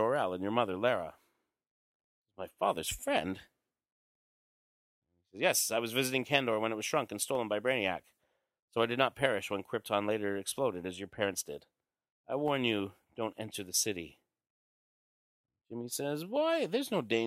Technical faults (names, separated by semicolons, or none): dropped samples